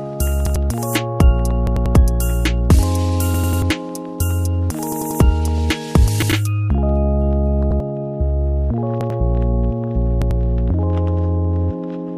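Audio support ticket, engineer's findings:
Repeated buffer: stutter at 0.46, 6.22, 7.71, 9.01 and 10.22 s (one repeat), and at 1.67, 3.34 and 4.92 s (three repeats). Segments of about 93 ms fit a 4096-sample buffer. Playback underrun. Spectrogram shows identical tiled blocks with vertical edges at the joins.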